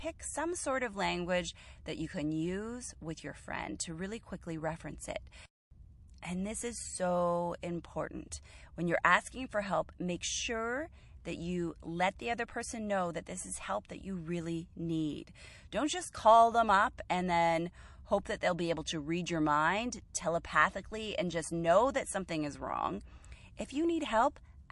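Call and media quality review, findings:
Watery, swirly texture across the whole speech clip; s sounds chirp and sound metallic, attacks smeared. Likely MP3 compression, damage plainly audible, fitting a bitrate near 48 kbps. Weak frequency lines flicker between frames.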